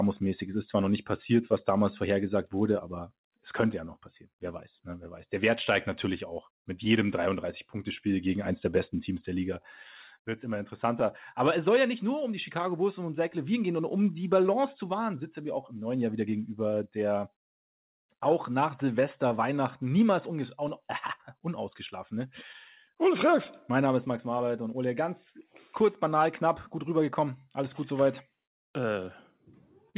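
Clock drift between sender and receiver runs through the whole clip. The sending side's clock runs roughly 2% slow, so the receiver's jitter buffer keeps draining and must be refilled. The result is a faintly unsteady pace rather than any single obvious break.

Repeated timing corrections run from 0.25 s to 28.82 s. To stay in step, the receiver keeps stretching the audio by repeating short pieces, slowing playback to 98% and adding around 0.4 s overall. These scattered edits sound like slight hiccups and a dragging tempo.

Scattered short gaps appear from 6.85 s to 29.96 s. Around twenty late or lost packets left small holes, each patched by extending the preceding sound, none longer than about 40 ms. Together they make brief ticks and smears against narrowband audio with nothing above 4 kHz, which fits a G.711 telephone codec.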